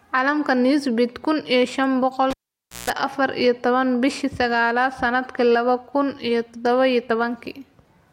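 Just after "shaan boqol", at 2.31 s, a sharp pop cuts the speech to near silence for about 545 ms. Within that gap a coarse 60 Hz mains buzz bursts in for roughly 160 ms, and a second pop at 2.90 s brings the sound back before "afaar iyo tobaan". This is a cable pulled and plugged in while live. The first pop is the contact breaking. The buzz comes from the plug tip touching before the ground connects, picking up hum, and the final pop is full contact returning.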